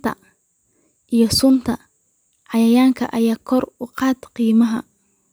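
No audible technical faults.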